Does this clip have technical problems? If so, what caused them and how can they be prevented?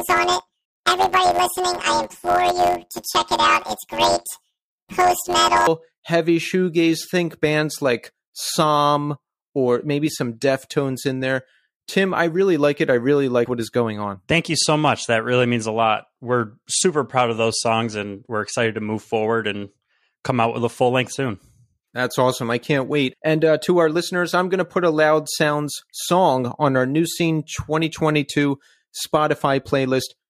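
Yes. From 0.0 to 5.67 s the speech has a robotic buzz at about 92 Hz, with no clear octave shift. This is planar audio read as interleaved: each 10.88 ms block of all-left-then-all-right samples plays as two double-speed halves. Prevent it by matching the reader's channel layout to the source format.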